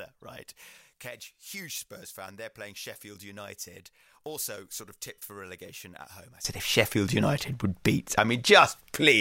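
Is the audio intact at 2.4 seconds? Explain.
No. From 0.0 to 6.45 s the speech sinks about 20 dB to a faint trace, likely one channel inverted, cancelling shared content when summed to mono.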